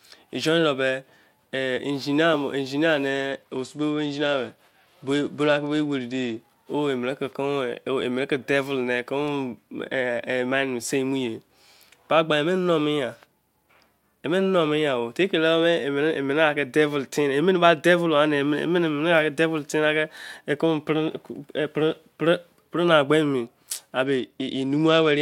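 From 3.32 to 6.40 s, and again from 24.06 s to the end of the clip, the speech shows a Bluetooth SBC bit pool drop. The link appears to have been starved, so the encoder cut its bit pool, which fits a fall from 31 to 14, near 99 kbps. The highest sub-bands lose their bits and the rest are coarsely quantised, so the top end goes dull and a gritty, granular noise rides under the speech.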